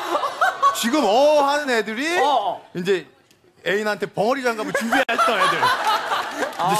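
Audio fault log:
5.03 to 5.09 s, gap at a join of encoded pieces: a silence of about 55 ms cuts into continuous sound with smeared edges, then the sound resumes where it stopped. Separately encoded segments were joined untrimmed, leaving encoder start delay and last-frame padding in place.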